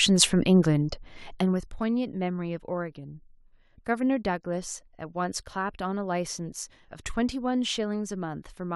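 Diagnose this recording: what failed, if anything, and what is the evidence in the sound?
Zipper noise at the gain stage, from 1.29 to 1.65 s: the speech drops by about 15 dB in roughly a hundred steps per second, each step a small click, so a rapid ticking rides on the fade. That rate fits a gain update once per buffer of about 10 ms, with no smoothing between buffers. A smooth fader move would change the level just as much but leave no ticking.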